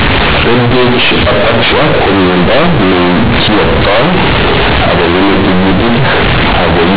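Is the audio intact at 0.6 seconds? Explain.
No. Companded audio read as linear runs through the whole clip. A-law bytes play as plain 8-bit samples without expansion, giving very loud, buzzy distortion and heavy noise.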